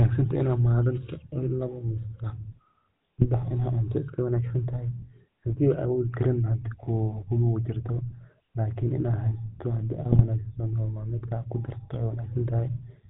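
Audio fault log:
Throughout: GSM full-rate codec. Speech carries a plainly audible buzzy, gravelly roughness. A pulse-driven vocal-tract model rebuilds it, with nothing above 4 kHz.
3.19–3.26 s and 10.12–10.22 s: GSM bit errors. Corrupted frames garble the speech into brief squawks and gargling. Flipped bits distort filter, pitch or gain values, which fits roughly three or four frames each.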